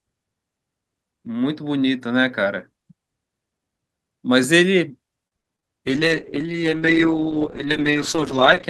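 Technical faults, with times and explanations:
5.27–5.64 s, repeated packet loss (robotic sound): four short dropouts land in quick succession, the longest about 43 ms. For roughly 100 ms the decoder covers the holes by extending the last received sound. Another 60 ms or so is simply missing, so the speech is choppy, with pieces absent. Concealed audio makes up about 28% of this brief stretch, enough to break up the flow.
5.87–8.69 s, call bitrate drop: from this point to the end of the clip, the speech turns rough and watery and loses its upper frequencies, so it sounds muffled. The degradation fits the encoder being pushed from around 48 kbps down to about 8 kbps after the call's bandwidth estimate fell. At that rate Opus quantises coarsely and band-limits the signal. The low quality holds for the final 2.8 s without recovering.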